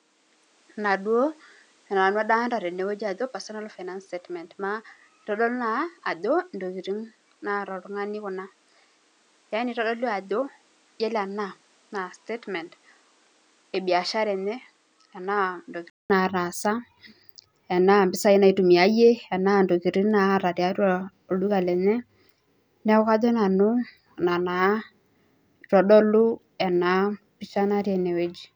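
Input switched to a poorer device, from the start to 16.1 s, is the likely cause of the first section's sound. Speech there is band-limited, with nothing above 9.8 kHz, noticeably quieter by roughly 10 dB, and carries its own background noise some 35 dB under the signal, giving a dull, slightly boxy tone. At 16.1 s a 200 ms silence marks the changeover, after which the sound opens up and grows louder.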